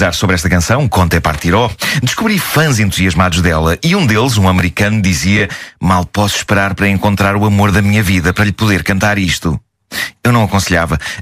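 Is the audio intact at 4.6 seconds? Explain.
No. At 4.59 to 4.61 s the audio has chunks out of order: one 10 ms chunk arrives a single chunk late and plays after its successor. Nothing is lost, but the swapped order creates three hard joins, heard as a brief jumbled moment.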